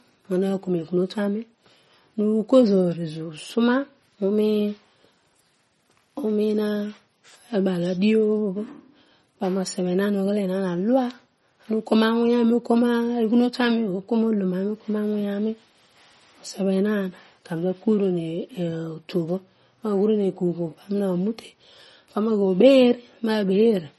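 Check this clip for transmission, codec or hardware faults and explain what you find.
One codec fault runs through the whole clip. Throughout, the speech has a hard treble ceiling at 11.8 kHz and a plainly watery, swirling texture, likely MP3 compression at a starved bitrate near 32 kbps. Weak frequency lines flicker on and off between frames, which sets it apart from a plain low-pass filter.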